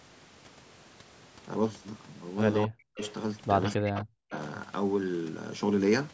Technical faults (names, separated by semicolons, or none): speech suppressed in double talk; echo leak